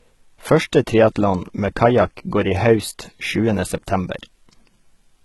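Speech, with a gritty, metallic, lispy treble throughout and nothing above about 11.8 kHz. This is likely HE-AAC compression: the treble is rebuilt by copying lower bands upward, so harmonics misalign, and the heavy damage points to a very low bitrate, around 16 kbps.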